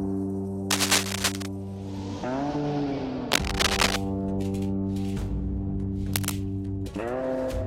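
A worn cable, connector or control being disturbed is the likely cause: as its contact resistance jumps around, uneven bursts of noise ride over the music. This cable scratch noise comes three times, from 0.71 to 1.46 s, from 3.32 to 3.98 s, and briefly from 6.14 to 6.32 s. The first two bursts are clearly louder than the music beneath, the last roughly level with it, each heard as harsh scratching and rustling.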